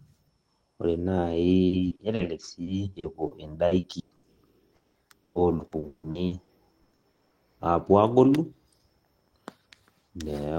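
The speech turns choppy and robotic three times, at 1.67 to 2.22 s, 2.63 to 4.26 s and 4.75 to 7.34 s, with the last stretch worst: about 40 percent of it is patched, with holes up to 200 ms. The earlier stretches are patched for roughly a quarter of their length, with holes up to 40 and 120 ms. This is repeated packet loss (robotic sound). Audio keeps going missing, each gap is filled by extending the previous sound, and the next gap arrives soon after.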